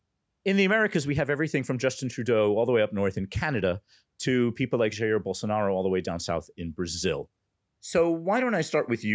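Nothing in this speech clip stands out as a fault: it has simply gone through ordinary call microphone processing, so the lowest bass is trimmed away and nothing sits above about 8 kHz, which is just how that path shapes sound.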